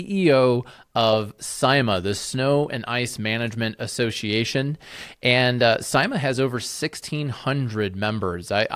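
No technical faults can be heard anywhere in the speech; the signal stays continuous and stable throughout.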